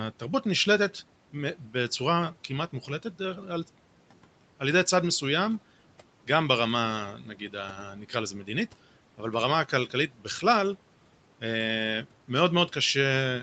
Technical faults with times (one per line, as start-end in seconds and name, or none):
7.23-7.54 speech cut by the noise suppressor
9.90-10.43 speech cut by the noise suppressor